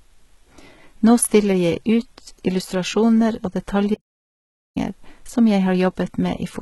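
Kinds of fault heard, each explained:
HE-AAC compression: Throughout the speech the treble sounds synthetic rather than recorded, with sibilants turning gritty and lispy and nothing audible above about 11.8 kHz. The likely cause is heavy HE-AAC coding, which fits a bitrate near 16 kbps. At that rate only the lower spectrum is coded properly and the upper band is regenerated by copying lower bands upward, so the harmonics above the crossover no longer match the real signal.
Audio dropout to silence: From 3.95 s to 4.76 s the speech stops abruptly and the signal falls to silence, with no room tone or noise floor underneath, for roughly 0.82 s before resuming mid-flow. A gap this clean most likely comes from the input being lost while recording continued and wrote silence, through a disconnect, a failed link or a mute. Whatever was spoken during that interval is not recoverable.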